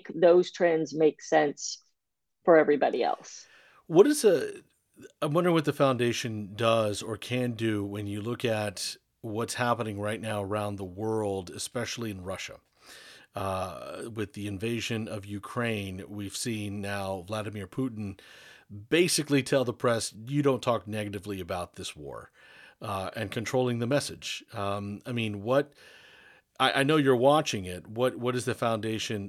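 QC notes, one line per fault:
No faults found in this speech recording. Nothing heard here calls for an entry on this sheet.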